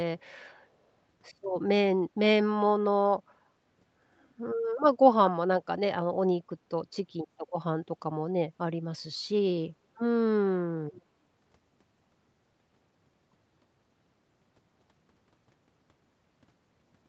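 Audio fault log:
10.93–11.02 s, echo leak: likely a loudspeaker-side echo canceller letting some pickup through, which returns a faint, brief scrap of the speech 377 ms late, well below the direct level.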